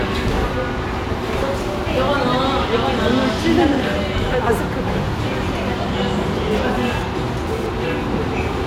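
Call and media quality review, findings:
GSM phone buzz, 6.51 to 7.67 s: raspy 217 Hz buzz with plenty of harmonics, about 17 dB under the sounds. Nearby 2G handset in a data burst, its radio pulses rectified in the audio path. Stops on its own.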